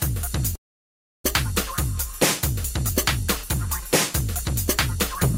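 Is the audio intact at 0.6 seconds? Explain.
No. At 0.6 s the clip is inside a call audio freeze running from about 0.55 to 1.26 s. The last sound is carried on briefly as a fading buzz or hiss, then about 670 ms of near silence follows. The likely cause is delayed packets draining the jitter buffer. Nothing is lost: the audio resumes where it stopped, pushed about 0.69 s later. On a spectrogram this shows as a short smeared band fading into a blank gap. On the waveform it looks like a flat stretch.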